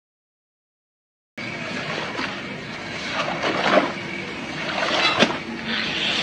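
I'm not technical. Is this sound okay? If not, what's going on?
No. This is a cut-off start: the first 1.38 seconds are dead silence, then the sound jumps in already underway at 1.38 s, because recording began late. Unlike a quiet lead-in or a gentle fade-in, nothing builds up; it simply switches on mid-sound.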